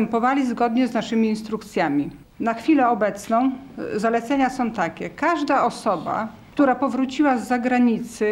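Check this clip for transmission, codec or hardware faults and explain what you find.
Nothing in the clip points to a transmission, codec or hardware fault. Listening through the whole recording turns up no event that needs explaining.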